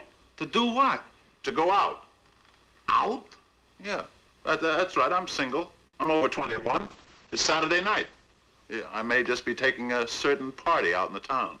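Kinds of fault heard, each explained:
repeated packet loss (robotic sound): From 5.87 to 6.23 s, packets went missing four times in quick succession, with the longest gap about 59 ms. Each hole was filled by stretching the preceding sound forward. About a third of that stretch is concealment rather than real audio. So it turns choppy and mechanical. Some 80 ms of material is simply gone, and the patches total about 115 ms.
call bitrate drop: Starting at 6.38 s, the encoder was pushed from 48 kbps down to 9 kbps. It sits at the lowest rate for about 1.25 s. At that rate the codec quantises coarsely and trims the audio band from 20 kHz to 8 kHz. The sound becomes rougher and duller, losing its top end. The stretch runs until 9.97 s.
jitter buffer speed-up: Near the end, from 11.08 to 11.58 s, the receiver had too much audio queued. To shrink the delay it cut out short pitch-period pieces again and again, about 50 ms in all. 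The pitch stays the same, but the audio plays at about 108% speed. That is fast enough to sound hurried over that last half second.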